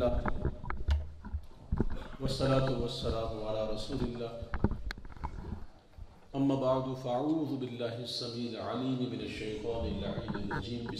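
At 5.47 s there is a block of digital silence. For about 5 ms the audio drops to silence, then returns. There is no fade on either side. The waveform jumps straight to silence and straight back. Each edge makes a sharp discontinuity. The gap is too short to hear as a hole. Instead it comes across as a single tick or small pop in the middle of the sound.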